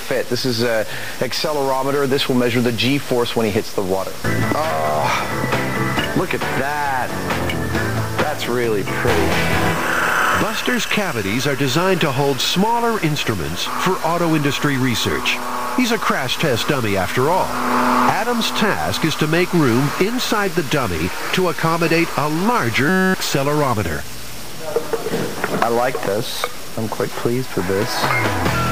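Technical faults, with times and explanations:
22.89–23.14 s: system hang loop. The system stalled while the hardware kept replaying one 5.33 ms buffer, which fits 256 samples. The exact repeat buzzes steadily at 188 Hz.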